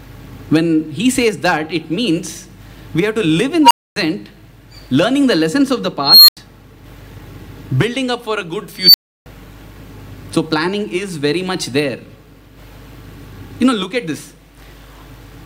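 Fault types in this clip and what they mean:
Unstable filter: a recursive filter's feedback runs away. A tone swells, clips, overflows, then cuts to silence. It happens three times here. The squeals sit around 1 kHz, 4 kHz and 5 kHz. Each build-up takes under 0.3 s. A brief gap follows.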